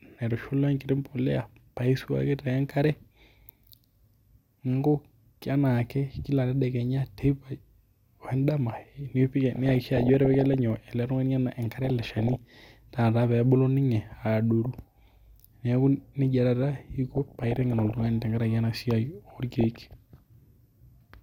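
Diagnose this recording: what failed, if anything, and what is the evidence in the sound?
The reception and codec stage failed, producing DAB burbling over the speech in five bursts: 9.55 to 10.54 s, 11.85 to 12.36 s, 14.65 to 15.26 s, 17.12 to 18.06 s and 19.23 to 19.94 s. Each burst puts short blips of noise into single sub-bands. Weak reception let bit errors past the error correction into the MP2 data, corrupting samples and scale factors. The 17.12 s burst is the densest, which fits its higher error rate, around one and a half percent.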